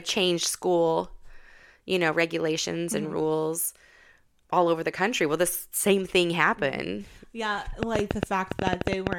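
A speech recording with a train of clicks near its end. From 7.83 s to 9.14 s, sharp ticks ride over the audio at about 10.8 per second. The spacing is irregular, not a steady beat. There are about fifteen of them, all much the same shape. They peak at roughly 20 dB above the speech, so they cut through clearly. The likely cause is electrical interference from nearby equipment or a faulty connection or power supply injecting repeated pulses.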